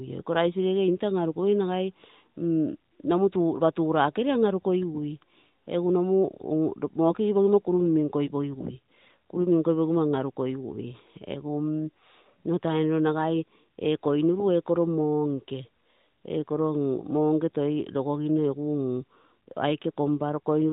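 Nothing in this speech amounts to a technical fault.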